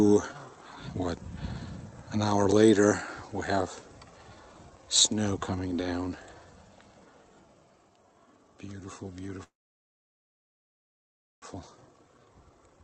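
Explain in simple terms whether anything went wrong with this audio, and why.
Two things go wrong near the end.

At 9.43 s the sound stops in a call audio freeze. The last sound briefly carries on and fades, then about 1.9 s of silence follows until 11.45 s. The audio then resumes exactly where it stopped, so nothing is lost. The likely cause is delayed network packets leaving the receiver's buffer empty.

Right after, from 11.54 s to 12.80 s, a jitter buffer speed-up makes the audio play about 13% faster at unchanged pitch. The receiver trims many tiny slices, roughly a seventh of a second in total, to work off the delay the freeze built up.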